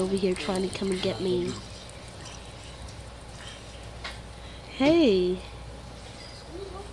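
Nothing stood out as a technical fault anywhere in the audio.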